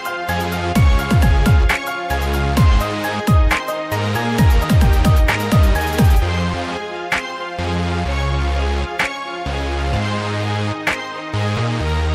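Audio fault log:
1.84 s, 3.60 s and 6.54 s: dropped buffer (overrun). At each point the audio jumps straight ahead with no gap of silence, as if a slice of the sound had been cut out and the two edges butted together. The likely cause is the program failing to collect its samples before the hardware overwrote them, discarding roughly 70 ms at the first two points and about 40 ms at the third.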